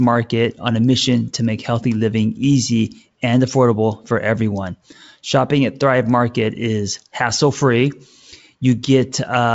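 Nothing in this speech recording stands out as a fault; it simply carries the usual character of G.722 wideband telephone coding, with the top of the sound stopping at around 7.7 kHz.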